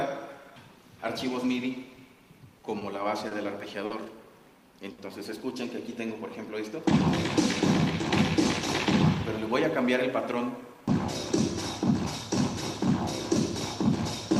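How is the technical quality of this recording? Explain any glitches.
The recording has three network-related glitches.

Between 1.95 and 3.91 s there are scattered short gaps, roughly seven, none longer than about 50 ms, filling around 150 ms in total. Late or lost packets were patched by extending the preceding sound, which shows on a spectrogram as brief smeared, repeated slices.

At 4.92 to 4.99 s a short stall from a late packet occurs. The jitter buffer emptied, so the receiver stretched the last sound for 60 ms before continuing where it left off. Nothing is lost, but the waveform shows a held, repetitive stretch.

From 9.83 to 11.85 s a jitter buffer speed-up removes short pitch-period pieces, about 70 ms overall, to reduce delay. The audio runs at 104% speed with its pitch unchanged, and the spectrogram's time axis compresses slightly without any harmonic shift.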